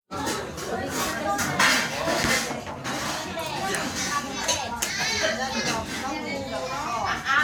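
A recording of everyday sounds, with nothing technically wrong to report.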